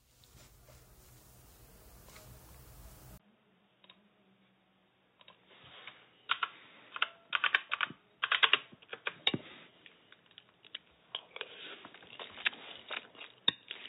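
At 3.18 s the audio breaks for about 20 ms, then returns duller and roughly 10 dB quieter, with nothing above 3.8 kHz and a faint new background noise. The likely cause is the input switching to a poorer device. Unlike a simple filtering fault, tone, level and noise all change together and stay changed to the end.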